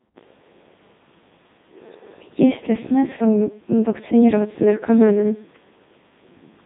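Speech heard through a Codec 2 vocoder for its whole length, band-limited to roughly 150 Hz to 3.7 kHz. The decoder rebuilds the voice from sine waves driven by pitch, voicing and envelope, so the original waveform is gone and the result sounds heavily robotic and buzzy, consistent with the 3.2 kbit/s mode.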